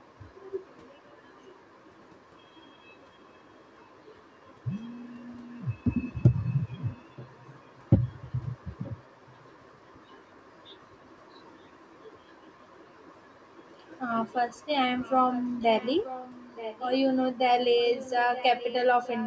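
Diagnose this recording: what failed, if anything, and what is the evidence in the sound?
A likely echo leak in the call processing: the far end's echo canceller let some of its loudspeaker pickup back into the microphone path. The result is a faint delayed copy of the speech, trailing the original by about 0.93 s, at 6.78–7.8, 8.83–9.79, 14.98–16.9, 17.76–18.74 and from 19.05 s to the end. The echo starts very quiet and grows more noticeable, reaching roughly 15 dB below the speech in the last three stretches.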